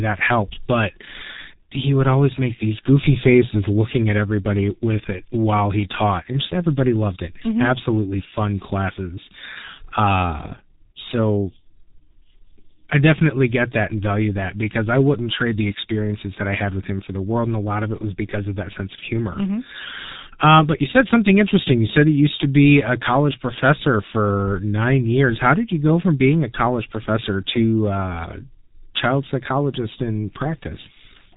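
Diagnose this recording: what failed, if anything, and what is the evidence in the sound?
The codec stage failed: G.723.1 coding runs throughout. The speech stops near 3.8 kHz and sounds muffled and hoarse, which fits a bitrate around 6.3 kbit/s.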